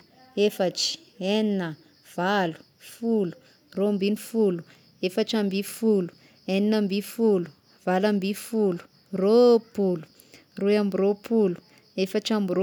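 No technical faults can be heard anywhere in the speech recording.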